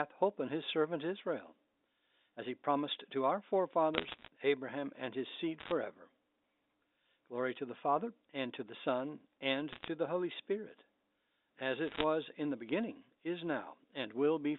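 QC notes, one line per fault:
3.94–4.28 s, bit errors on a digital phone line, just after "he promised to our": roughly one bit in a hundred flips, each corrupting a single G.711 sample, with high-bit or sign hits giving sharp ticks, so the ticks run together as crackle.
5.60–5.72 s, bit errors on a digital phone line, after "and his seed": a lighter, shorter scatter of flipped bits gives brief crackle over the unchanged band-limited speech.
9.73–9.88 s, bit errors on a digital phone line: a light burst of corrupted samples, where sign or high-bit hits jump the waveform abruptly and tick audibly.
11.88–12.04 s, bit errors on a digital phone line, just before "in the beginning is": a denser burst at about 1% error rate, so clustered single-sample ticks crackle across the speech.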